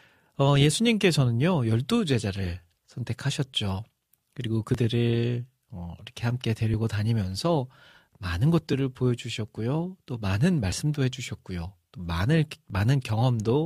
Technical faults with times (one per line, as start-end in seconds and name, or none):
0.74 overlap between stream segments
4.74 overlap between stream segments
6.74 overlap between stream segments
8.73 overlap between stream segments
10.72 overlap between stream segments
12.70 overlap between stream segments